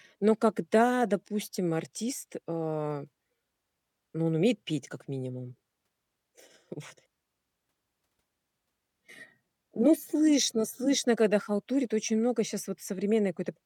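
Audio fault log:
No faults detected in this speech recording.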